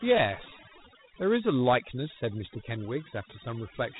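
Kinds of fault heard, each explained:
Overdone noise removal: throughout the clip, a noise reduction stage set far too hard keeps pulling individual frequency bands down to nothing whenever they sit close to its idea of the noise floor. The pauses collapse into an unnatural near-silence dotted with small twinkling specks, and softer parts of the speech are stripped away along with the noise.
Dialogic VOX ADPCM: present across the whole recording, with plainly audible coding damage. The sound points to 4-bit OKI-style adaptive delta coding, and a rate of about 32 kbps fits 8,000 samples a second. Each sample stores only a coarse step change, so a gritty, granular hiss rides along with the speech. Nothing is heard above about 3.8 kHz, which gives the muffled, telephone-menu bandwidth.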